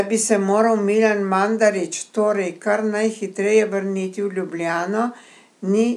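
Nothing stood out as a technical fault on listening to this speech recording.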